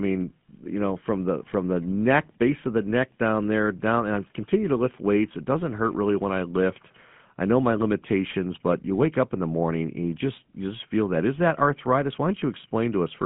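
Throughout, the speech has passed through the GSM full-rate codec, which rebuilds the voice from a vocal-tract model fed by sparse, regularly spaced pulses, consistent with a 13 kbps coder. Nothing above 3.7 kHz survives within a 150 Hz to 3.4 kHz band, leaving a plainly audible buzzy, gravelly roughness.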